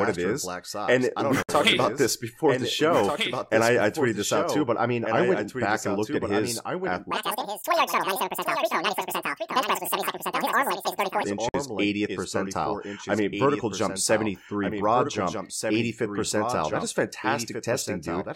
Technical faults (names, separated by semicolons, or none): doubled audio track; gap at a join of encoded pieces; section at the wrong speed